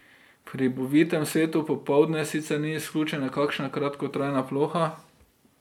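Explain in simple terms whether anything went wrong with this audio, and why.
Nothing went wrong here: the speech comes through steady and intact, with no technical faults to be heard anywhere in the recording.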